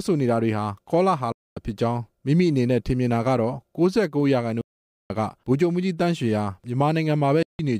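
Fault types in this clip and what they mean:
Bluetooth dropout: packets likely failed to reach the headphones in time and were discarded, so the sound cuts to silence at 1.32–1.57 s, 4.61–5.10 s and 7.43–7.59 s, gaps of about 0.24, 0.49 and 0.16 s, then resumes further along, as though it kept playing.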